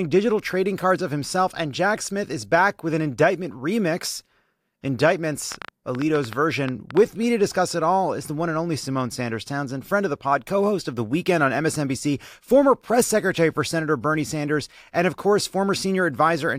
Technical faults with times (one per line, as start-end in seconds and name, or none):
5.52-6.98 train of clicks